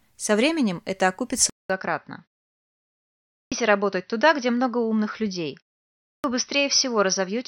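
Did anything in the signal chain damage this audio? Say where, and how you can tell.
Yes. At 1.50 s, after a 200 ms gap, the sound turns dull with nothing above 6 kHz and level unchanged, likely an input switched to a poorer device. The spectrogram's top band goes empty.

Clipped start after a pause at 3.32 s and 6.04 s: the playback device wakes late after 1.13 s and 0.5 s pauses, losing about 200 ms. The waveform jumps abruptly out of silence.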